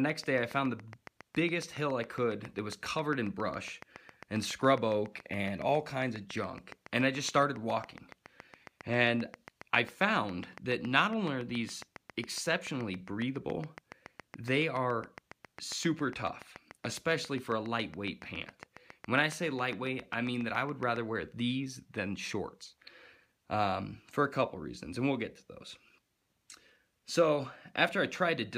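Interference from nearby equipment or a faulty connection or power supply is likely injecting pulses into the signal, producing a train of clicks from 0.10 s to 20.97 s: around 150 evenly spaced ticks at 7.24 per second, peaking about 5 dB above the sound and audible throughout, pauses included.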